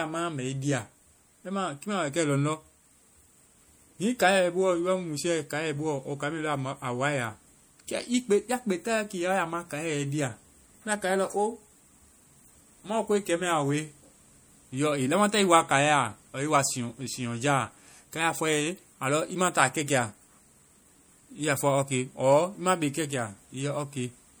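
The damage most likely comes from MP3 compression, running throughout the speech. With too few bits to go round, at a level that fits roughly 64 kbps, the encoder has discarded weak frequency lines, which flicker in and out from frame to frame. The result is plainly audible: a watery, swirling texture, metallic chirps on sibilants and smeared consonant onsets. The treble still reaches about 21.1 kHz, so the loss lies in this unstable detail rather than a cut top end.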